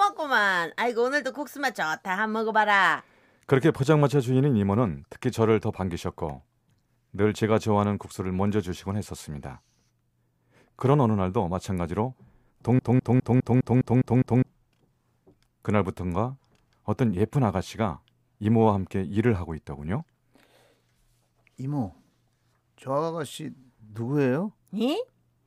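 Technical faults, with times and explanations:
12.79 to 14.48 s, broken-record loop: a single 204 ms fragment of the speech plays eight times back to back, identical on every pass, and the audio that belonged in that stretch is lost. The likely cause is a stalled player or stream that kept resending the last piece it held. On a spectrogram the same 0.2 s pattern tiles across the span like wallpaper. The waveform shows one shape copied repeatedly, with abrupt seams at each restart.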